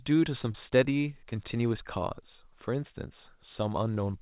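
At 0.52 to 0.56 s and again at 1.30 to 1.33 s the speech briefly smears, a short concealed packet loss each time. A chunk of audio, about 20 ms, which fits one lost packet, arrived too late, so the receiver extended the preceding sound and then crossfaded back. On a waveform each spot shows a short stretch continued from the sound before it. On the spectrogram it appears as a smoothed patch inside a band that stops at 4 kHz.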